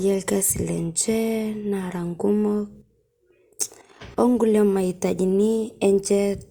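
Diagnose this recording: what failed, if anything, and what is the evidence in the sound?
Nothing failed; no fault is audible in this speech.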